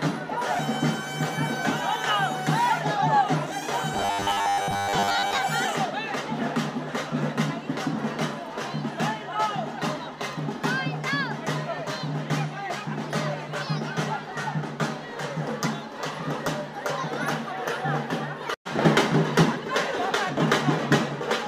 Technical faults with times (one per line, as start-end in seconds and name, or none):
3.94-5.38 robotic sound from repeated short buffers